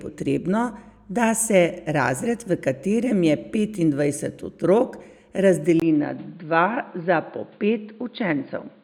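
At 5.80 s the speech drops out for a brief 20 ms gap, then returns sounding dull and boxy through to the end, with nothing above 4.7 kHz and a faint new background noise well below the speech, while loudness stays about the same. This points to the input likely having switched to a poorer device, a second microphone or headset call profile with a narrower band, its own coloration, and its own noise floor.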